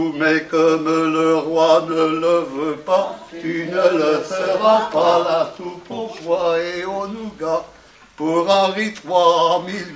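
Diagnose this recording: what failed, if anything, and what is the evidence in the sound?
Nothing failed here as far as my ears can tell, since no stage in the chain, from the wiring through to playback, leaves any audible mark on the sound.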